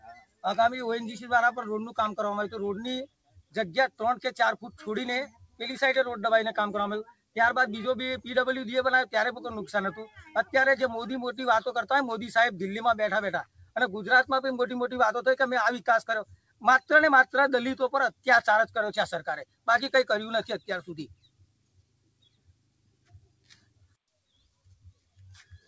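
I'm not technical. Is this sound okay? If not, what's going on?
No. The sound keeps swelling and sinking in level, with held sounds and fading tails thinning out. A noise suppressor applied to music or sounds was left on and treats steady sound as noise.

Sound cut by the noise suppressor shows up at 0.0–0.44, 3.06–5.6, 7.08–7.36, 10.07–10.53, 13.45–13.75, 16.25–19.68 and 20.59 s to the end, where sound dips or cuts short.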